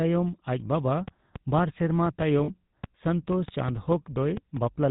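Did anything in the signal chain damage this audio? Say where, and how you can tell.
Yes. Codec stage: the whole clip carries GSM full-rate coding, plainly audible as buzzy, gravelly roughness, with the spectrogram empty above 4 kHz, fitting a 13 kbps stream.

Analogue wiring or interface: a train of clicks from 1.08 to 4.58 s, about 15 irregular ticks near 3.4 per second, about 5 dB above the speech. They show as thin vertical spikes on the waveform, likely from nearby interference.

Network stage: lost GSM frames at 2.44 s, 40 ms held as a metallic ring where the last good frame repeats. The spectrogram shows smeared, flat bands there.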